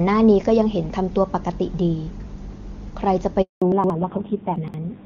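At 3.42 s the call is handed from one network to another, and no speech frames arrive during the switch. This handover gap cuts the sound off within a few tens of milliseconds and leaves about 200 ms of silence, until 3.62 s. Whatever was said in that span is lost.

When the new link starts at 3.62 s, the call falls back to narrowband. The wideband HD Voice codec was carrying full, clear speech up to that point, but the call now runs on an older narrowband codec. From there to the end, nothing is heard above 4 kHz, and the voice turns dull and somewhat rough. That roughness fits a low-rate narrowband mode of around 5.9 kbit/s.

From 3.72 to 3.90 s, chunks arrive out of order. A 60 ms chunk is written two chunk-lengths late, so it plays after the audio that should follow it. No sound is lost, but the three hard joins create a brief jumbled moment.

The same out-of-order chunk fault recurs from 4.56 to 4.74 s. 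Another 60 ms chunk lands two chunks late, and its three abrupt joins produce a second garbled instant within the narrowband stretch.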